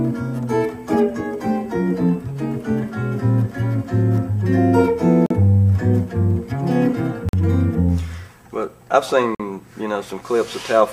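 Hard-edged dropouts of silence cut into the sound at 5.26 to 5.31 s, 7.29 to 7.33 s and 9.35 to 9.40 s, each about 42 to 47 ms long and roughly 2 s apart. This is a gap between stream segments: mismatched time stamps at the boundaries of 2-second segments leave small holes that the player pads with silence, delaying the sound without losing any.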